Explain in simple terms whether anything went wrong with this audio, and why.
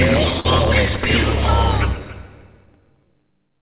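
Two things went wrong. Throughout, a block size mismatch (truncated) cuts off the end of each block, which fits 512-sample blocks. This causes a steady 109 Hz buzz and makes the audio run 1.16 times fast at about normal pitch. From 0.40 to 0.46 s, short concealed packet loss drops about 40 ms, which is patched by extending the previous sound and heard as a brief smear. Through the phone-call codec, nothing above 4 kHz comes through.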